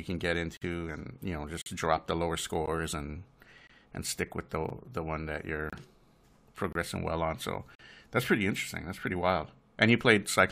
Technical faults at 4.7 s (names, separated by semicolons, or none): gap between stream segments